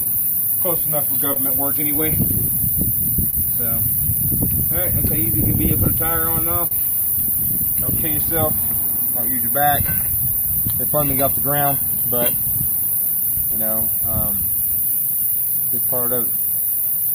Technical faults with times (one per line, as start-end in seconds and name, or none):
0.00-17.14 clock drift between sender and receiver
0.79-16.97 repeated timing corrections
1.33-1.38 short stall from a late packet
3.30-3.35 short stall from a late packet
5.25-6.73 scattered short gaps
9.21-13.23 scattered short gaps